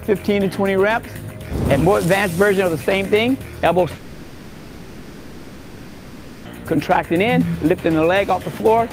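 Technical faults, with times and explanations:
3.95 to 6.47 s, long network dropout: for about 2.5 s the sound gives way to a smeared continuation of the last moment, a buzz or hiss that fades toward a low steady noise with no true silence. The likely cause is audio packets that stopped arriving, so the receiver filled the gap by itself. The sound then resumes further on, and the stretch in between never plays.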